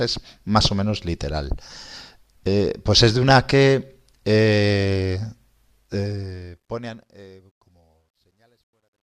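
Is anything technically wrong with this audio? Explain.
Yes. From 5.81 s to the end at 9.13 s, the speech shows truncation distortion on a fade. The fade-out, which starts around 5.8 s, passes through a gain stage that keeps too few bits and adds no dither, consistent with about 12-bit resolution. As the level drops, the waveform collapses into coarse steps. The tail turns gritty, and from 7.42 s to 9.13 s it is at its worst.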